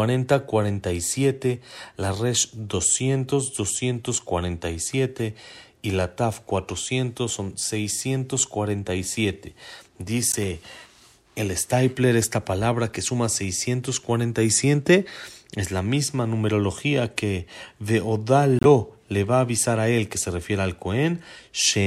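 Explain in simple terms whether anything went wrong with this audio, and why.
Brief chirps and blips cut into the speech four times: at 2.94 s, at 5.19 s, from 10.31 to 10.35 s, and from 18.59 to 18.65 s. The first and last are loud and sharp, the one at 10.31 s is a little softer, and the one at 5.19 s is much quieter. These are corrupt frame decoded faults. Some of the compressed data was damaged, and the player decoded it anyway, so for a split second sound landed at the wrong pitches.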